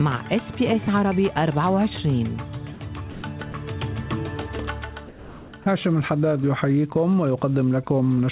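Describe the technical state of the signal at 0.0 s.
At 0.0 s the signal is intact with no fault present, and the band-limited sound of the call path, with nothing above 4 kHz, fits a narrowband G.711 mu-law link at 64 kbps.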